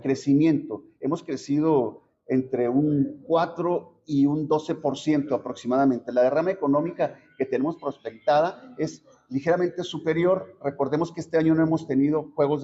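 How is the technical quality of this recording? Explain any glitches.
The technical quality is sound, with no glitches to explain.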